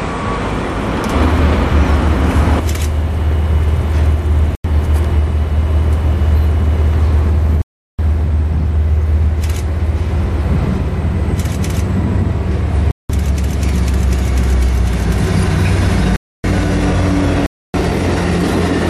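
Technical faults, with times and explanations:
4.55 to 17.74 s, block of digital silence: the audio drops out without a fade at 4.55 s (0.09 s), 7.62 s (0.37 s), 12.91 s (0.19 s), 16.16 s (0.28 s) and 17.46 s (0.28 s), from unfilled output buffers or invalid calculated values. Waveform shows flat gaps; spectrogram shows blank vertical bands.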